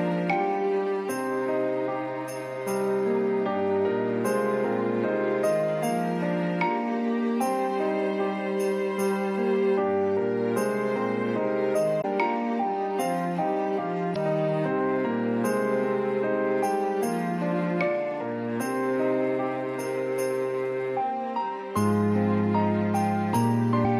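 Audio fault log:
12.01-12.05 s, 14.12-14.17 s, 23.84-23.86 s: damaged data in a compressed stream. Three short glitches, 44, 44 and 26 ms long. Corrupted bytes make the decoder misread those frames and lose sync, so each spot gives a brief chirp, squawk, click or short hole.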